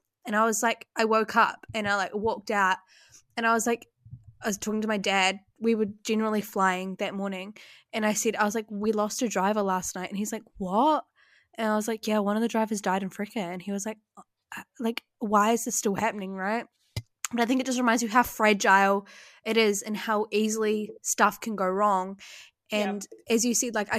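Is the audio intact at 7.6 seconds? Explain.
Yes, the audio is intact at 7.6 seconds, with no dropout, click, distortion or other fault to be heard at that moment.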